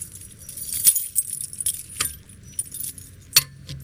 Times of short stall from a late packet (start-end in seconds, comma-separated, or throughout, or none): 2.23-2.28, 2.61-2.66